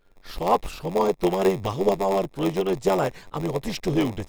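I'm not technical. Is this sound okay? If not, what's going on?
No. From start to end there is a block size mismatch (padded): each 512-sample chunk is only partly filled, with silence making up the rest. Those gaps form a steady 93.8 Hz buzz, and the speech runs at 0.938 times normal speed, though the voice's character stays the same.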